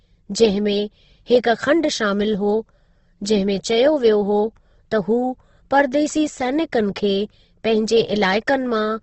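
Throughout, the speech sounds grainy and rough, with nothing above 8.2 kHz; that's likely Opus compression in its music mode, squeezed to something like 16 kbps.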